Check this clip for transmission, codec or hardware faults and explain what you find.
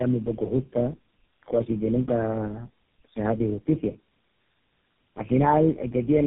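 The clip has one fault, present throughout: tandem speech coding. The call seems to pass through about four speech codecs in series, each re-encoding the previous one's errors. Unlike a single low-bitrate codec, the roughness, muffling and warble compound, and nothing remains above 3.7 kHz.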